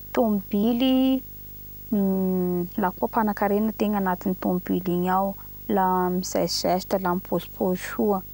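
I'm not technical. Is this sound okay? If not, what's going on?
No. There is video or display buzz under the speech from start to finish. A screen or video cable is leaking into the audio, causing a steady, fairly noticeable 50 Hz hum with hiss on top, plus a very high whine near 15.6 kHz.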